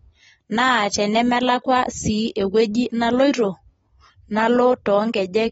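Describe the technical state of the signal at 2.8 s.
At 2.8 s the speech carries the same damage heard across the whole clip. It is most likely AAC compression. Nothing sounds above about 7.6 kHz, so the top end is dull. Consonants and sibilants sound smeared and fizzy, and held sounds warble. This fits a low-bitrate AAC-LC stream, around 24 kbps. At that rate the coder quantises its frequency lines coarsely, lowers the cut-off and leaves gaps in the spectrum.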